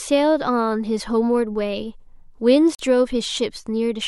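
At 2.75 s the speech drops out to dead silence for about 44 ms, then carries on at 2.80 s. That's a Bluetooth stall, most likely: the wireless link held up packets, the headphone buffer ran dry, and playback just paused until the audio caught up.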